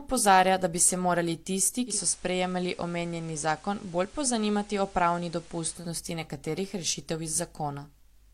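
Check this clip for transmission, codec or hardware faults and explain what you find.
One fault is audible: the speech goes through a digital radio blend to analogue. From 1.85 s to 5.89 s the receiver loses its digital stream and cross-fades to the station's FM broadcast, then back. Each blend takes 144 ms. The level drops by about 1 dB. A hiss sits roughly 25 dB below the speech, and it clears once the digital signal returns.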